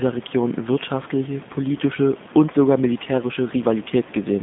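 From start to finish the speech carries G.729 codec damage, and it is plainly audible. The codec rebuilds each 10 ms frame from a vocal-tract filter, a pitch predictor and a few pulses, so voicing sounds slightly rough and synthetic, and the room noise, about 19 dB below the speech, warbles. The spectrogram shows a telephone band of roughly 150 Hz to 3.6 kHz, with nothing above 3.7 kHz, which fits an 8 kbit/s G.729A stream.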